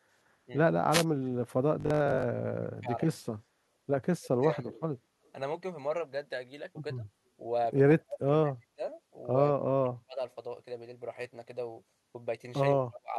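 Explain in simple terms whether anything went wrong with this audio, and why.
Yes, several things went wrong in this speech.

The most frequent fault is speech suppressed in double talk. It happens seven times: 0.46–0.52 s, 2.62–3.18 s, 4.16–4.82 s, 6.96–7.02 s, 7.98–8.83 s, 9.6–10.21 s and 12.82–13.17 s. The talker's voice drops away each time. The two shortest dips are slight. The others are deep, nearly silencing the voice for up to most of a second. The likely cause is an echo canceller. When both sides talk at once, it cannot tell the talker apart from the loudspeaker's echo, so it turns everything down.

At 0.91–1.05 s there is a wireless microphone noise hit. It sounds like a quick swish of static. The microphone's radio signal briefly faded. The receiver's own hiss rose up and covered the voice.

From 1.80 to 2.26 s the voice turns metallic and buzzy. This is robotic sound from repeated short buffers. 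The buzz sits at 50 Hz, meaning a tiny piece of sound repeats every 20 ms. That fits a 20 ms buffer. About half of that stretch is repeats rather than real audio. The likely cause is new audio arriving too late, so the software kept replaying the last scrap to fill the gap.

At 5.25–5.30 s there is a brief echo leak. A very faint copy of the voice comes back 170 ms late. It likely comes from a loudspeaker on the other end. That side's echo canceller missed a small piece of what its microphone picked up and sent it back.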